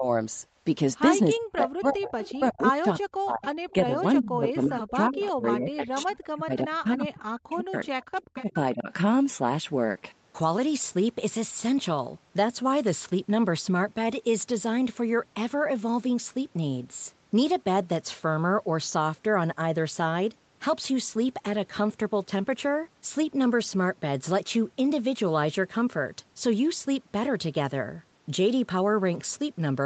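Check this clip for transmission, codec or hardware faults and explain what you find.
Two faults stand out, both typical of a hands-free call: speech suppressed in double talk, and echo leak.

Speech suppressed in double talk, from 0.0 to 0.07 s and across 1.36 to 8.89 s: the echo canceller, likely unable to separate the near talker from the far side, pulls the speech down. The dips reach about 40 dB, and around five seconds of that stretch are affected.

Echo leak, at 1.36 to 2.33 s, 3.7 to 4.65 s, 5.23 to 5.28 s and 8.02 to 8.52 s: this is likely residual loudspeaker pickup slipping past the canceller. It returns as a copy delayed by 358 ms and sits about 15 to 20 dB below the speech.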